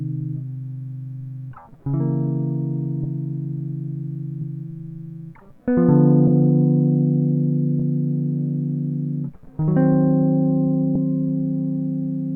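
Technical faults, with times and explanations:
1.51, 3.03, 4.41, 6.27, 7.79 and 10.95 s: compressed frames skipped. The music jumps ahead by roughly 100, 200, 70, 70, 40 and 100 ms. Whole compressed frames were dropped, which fits a 20 ms frame.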